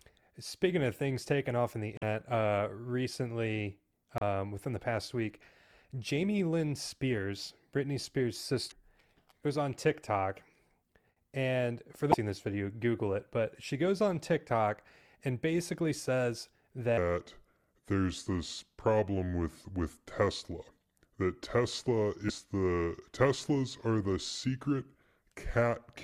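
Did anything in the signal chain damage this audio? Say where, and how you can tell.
Yes, speech in this clip has two kinds of damage. There is damaged data in a compressed stream at the codec or storage stage. Brief chirps or blips occur at 1.95–2.03 s, 4.18–4.22 s (between "uh recently" and "within the past week"), 8.68–8.72 s, 12.10–12.14 s (between "and for" and "this video"), and 22.26–22.30 s. Each lasts 40 to 80 ms. Corrupt frames make the decoder lose sync and skip ahead to the next header. On a spectrogram each shows as a thin broadband vertical smear or gap, and on the waveform as an abrupt discontinuity.

The second is a section at the wrong speed. From 16.98 s, right after "and basically says", to the end, the audio plays at 0.773 times normal speed. Pitch drops roughly four semitones and the speech turns deep and drawn out. This is likely a playback or editing stage that resampled the material against the wrong clock. 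On a spectrogram the harmonics and formant bands sit visibly lower and syllables stretch wider in time. The waveform shows longer periods and slower envelopes.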